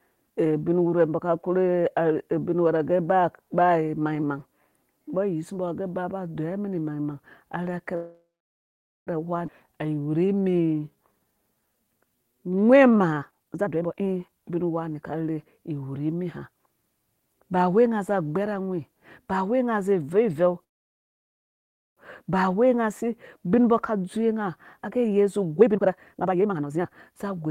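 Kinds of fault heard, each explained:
Call audio freeze: The speech stops at 7.95 s and resumes at 9.09 s, about 1.1 s later, with nothing lost. A second stop runs 20.64 to 21.99 s, nearly all silence, before "ba wei nga zi". Packets likely stalled and the buffer ran dry.
Skip ahead: At 9.47 s playback jumps forward with almost no gap. Roughly 0.7 s of speech is gone, and the two sides are joined nearly directly. This cancels much of the delay the first freeze added.
Jitter buffer slow-down: From 9.67 to 13.15 s the speech runs at 85% speed with unchanged pitch. Single pitch periods and pause fragments were repeated, adding 521 ms. Sounds are drawn out, rebuilding the buffer's reserve after the jump.
Jitter buffer speed-up: From 13.21 to 15.57 s the speech runs at 139%, leading into "iwurhi mi", and from 23.97 to 27.46 s at 134%. Each time roughly a second of short pitch-period pieces was cut, so the speech sounds hurried at the same pitch.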